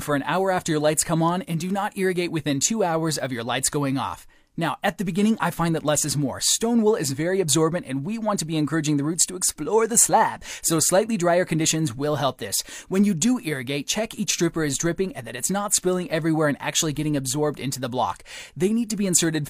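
No technical faults can be heard anywhere in the recording, and the signal stays steady and intact throughout.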